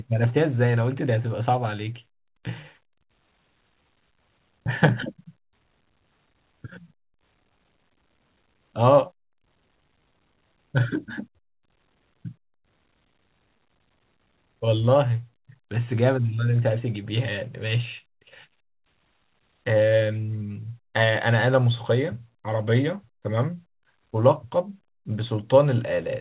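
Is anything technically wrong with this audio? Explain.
No, nothing is technically wrong with this speech: it carries the narrowband character of a normal WebRTC call path, with no content above about 4 kHz, which fits the G.711 A-law telephone codec.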